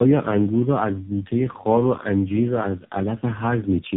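Tandem speech coding runs throughout the clip. The speech was decoded and re-encoded several times, each coder working on the previous one's damaged output. The sound points to four or so speech codecs in sequence, leaving it rough, muffled and warbly, with nothing above 3.7 kHz.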